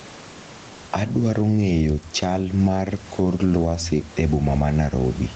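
Gain pumping runs through the whole speech clip: background noise swells by around 10 dB in gaps and ducks under loud syllables, likely from excessive input gain driving a fast limiter.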